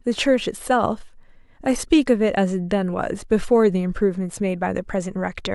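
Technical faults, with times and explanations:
No technical faults can be heard in this recording.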